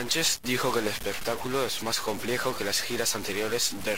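Across the whole speech clip a harsh, buzzy distortion rides on the signal, and the pauses fill with steady noise. This is likely a stuck bit, one data bit held fixed, adding an error step of about -30 dBFS to roughly half the samples.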